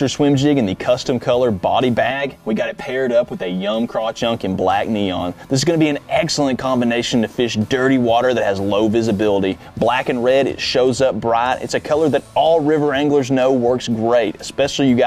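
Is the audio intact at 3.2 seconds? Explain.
No. From 2.11 to 4.21 s the clip shows channel delay (comb filtering): one channel runs late by roughly 5 ms, and when the two are folded to mono, whatever they share cancels at regularly spaced frequencies, the lowest near 100 Hz. At 3.2 seconds this leaves a row of fixed notches across the spectrum, so the sound turns hollow and phasey.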